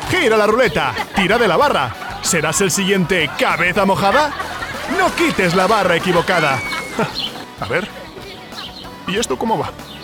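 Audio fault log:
3.76 s, dropped buffer (overrun): an abrupt jump in the sound, with no gap or silence at the join. The material on either side meets directly, as if a short stretch, around 40 ms, had been cut out of the middle. The likely cause is the capture software falling behind, so the hardware overwrote samples before they were read and they were lost.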